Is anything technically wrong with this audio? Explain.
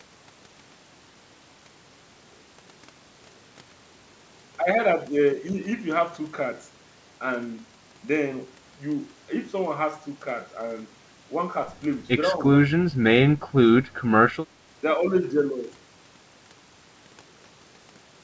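Yes. The speech briefly dips three times in close succession, at 12.31 to 12.4 s, 12.64 to 12.74 s and 12.91 to 12.98 s. The first dip is slight, only a few decibels. The second and third are deep, about 20 dB down, lasting roughly 100 ms and 70 ms. This is likely speech suppressed in double talk: the echo canceller could not tell the local talker from far-end echo and attenuated both together.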